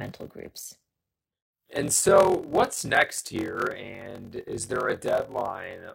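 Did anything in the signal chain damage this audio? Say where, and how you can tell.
Yes. A steady 43.1 Hz buzz runs through the whole speech clip, and delivery drags to 0.861 speed with its timbre intact. This is a block size mismatch (padded) at the driver or buffer stage.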